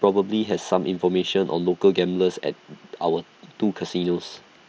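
Concealed Bluetooth headset packet loss occurs at 4.29 s, near the end of the speech. A brief stretch of about 7.5 ms, consistent with a single lost mSBC frame, never arrived from the headset. The receiver covered the gap by repeating a closely matching piece of the preceding waveform. Because the dropout is so short and isolated, the patch is almost inaudible. The surrounding audio carries the light grain of the wideband mSBC headset codec.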